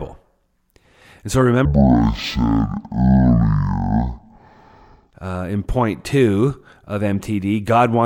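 From 1.65 s to 5.13 s the speech shows a stereo read as mono fault: the left and right samples, which alternate in the stream, are taken in sequence as one channel. Each moment of sound therefore spans twice as many samples, so playback runs at 0.5x speed and drops a full octave, 12 semitones, giving a slow, deep, dragging voice. A fainter mirrored copy also sits in the upper half of the spectrum.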